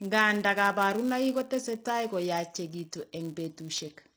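From start to finish, the speech has gritty, metallic sibilants, and the treble has a synthetic sheen. This is likely HE-AAC compression at a low rate, near 24 kbps. The upper band is rebuilt from copied lower bands, so its harmonics don't align.

A steady buzz at 188 Hz also runs through the whole clip, rising and falling with the speech level. This comes from the filter restarting on every block, which fits a 256-sample block. Each block begins from silence and leaves a small tick.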